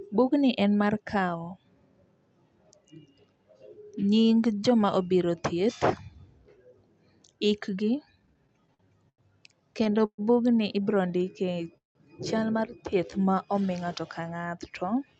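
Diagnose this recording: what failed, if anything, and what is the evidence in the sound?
Repeated stalls (stutter) at the network and jitter buffer stage: ten short gaps from 8.05 to 9.21 s, then four from 9.84 to 10.21 s, the longest about 128 ms. Late packets kept draining the buffer, so each hole got filled from the last sound.

Jitter buffer slow-down between 10.98 and 11.73 s, then 12.90 to 13.71 s, playing at about 90% and 86% speed with unchanged pitch. The receiver repeated pitch periods to rebuild its reserve.

Call audio freeze from 11.77 to 11.98 s: the sound smears, fades, then sits silent for about 150 ms before resuming where it stopped. The likely cause is packets held up in transit, pushing everything roughly 177 ms later.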